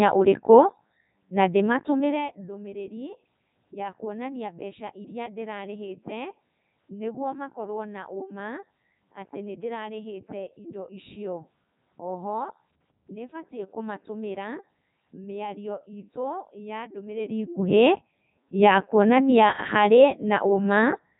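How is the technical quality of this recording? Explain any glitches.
Pretty rough, honestly: the whole recording has been through a Codec 2 vocoder, and the damage is heavy from start to finish.

Codec 2 vocoder: Codec 2 discards the actual waveform and sends only pitch, voicing, energy and a spectral envelope, then rebuilds the speech from sine waves. That's why it sounds robotic and buzzy. Nothing survives above 3.8 kHz, and the quality fits its top 3.2 kbit/s mode.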